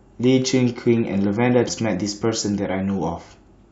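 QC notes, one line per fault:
1.67–1.69 s, damaged data in a compressed stream: a brief glitch cuts into the speech for about 20 ms where corrupted bytes in the coded stream make the decoder misread its frames, lose sync and hunt for the next valid header before normal decoding resumes. On a spectrogram this shows as a narrow vertical break out of keeping with the surrounding harmonics; the waveform shows a short disruption.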